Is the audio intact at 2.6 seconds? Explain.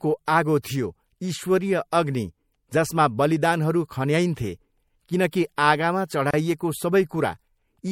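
No, at 2.6 seconds the speech carries MP3 compression damage, and it runs through the whole clip. Faint detail flickers between frames, giving a watery, swirly edge and smeared consonants, likely from encoding at around 64 kbps.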